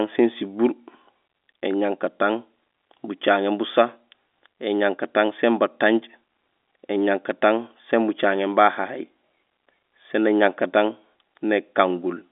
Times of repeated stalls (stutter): none

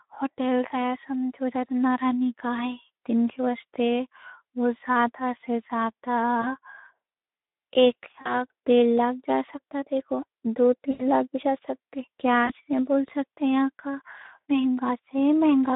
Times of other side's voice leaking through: none

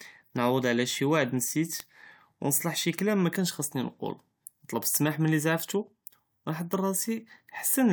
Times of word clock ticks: 0.22-7.81

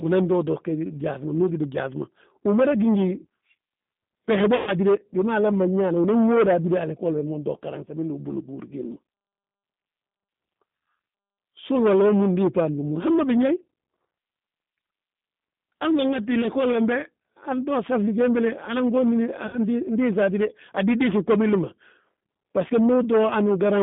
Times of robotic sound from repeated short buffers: none

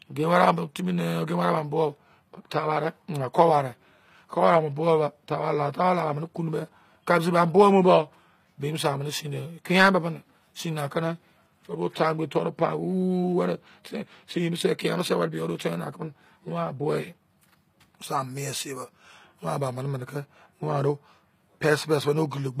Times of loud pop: none

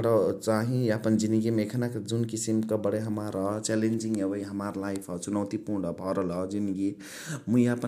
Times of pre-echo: none

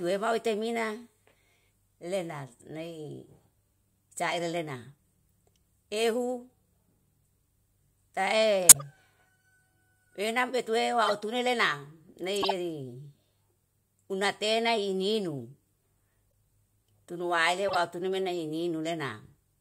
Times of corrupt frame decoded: 8.69-8.82, 11.06-11.12, 12.36-12.52, 16.31, 17.68-17.75

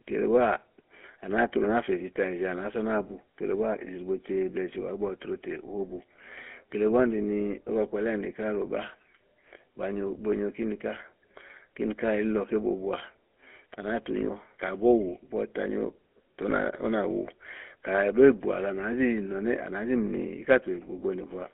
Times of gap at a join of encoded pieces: none

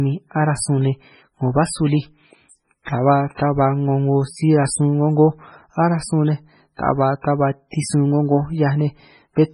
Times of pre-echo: 2.49-2.52, 2.84-2.87, 3.35-3.39, 7.71-7.73

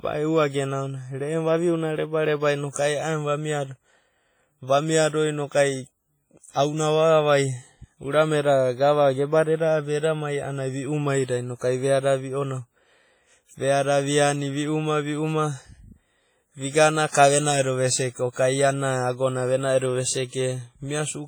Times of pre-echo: 11.24-11.29, 17.09-17.14, 18.32-18.36

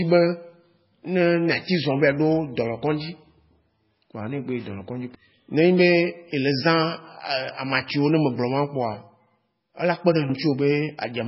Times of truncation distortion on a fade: none

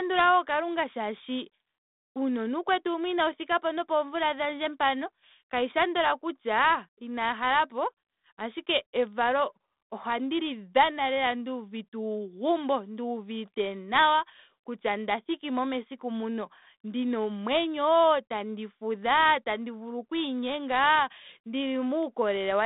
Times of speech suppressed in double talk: none

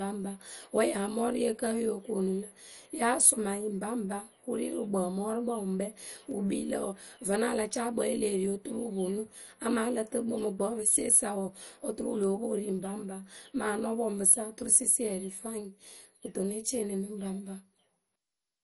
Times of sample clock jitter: none

